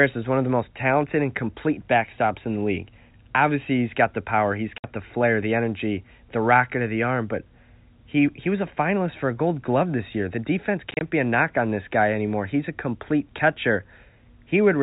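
A speech recording over a G.711 telephone path is broken twice by packet loss filled with silence. At 4.78 s, between "got the power he's" and "the flair the energy", a single 60 ms hole opens. At 10.91 to 11.01 s, just before "be a knock on", the same 60 ms of sound is lost as several short gaps, none longer than 30 ms. The gap sizes fit 10 ms packets. Unlike concealment, nothing is smeared or repeated: the gaps are dead silence with hard edges.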